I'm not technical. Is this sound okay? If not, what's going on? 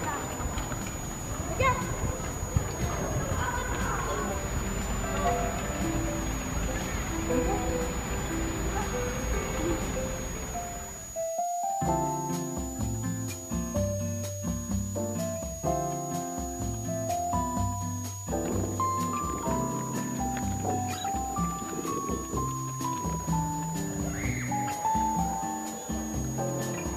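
No. A switching supply whistle runs the whole way through: a thin high whine around 7 kHz, wandering between 6.6 and 7.0 kHz, from a switching power supply whistling audibly.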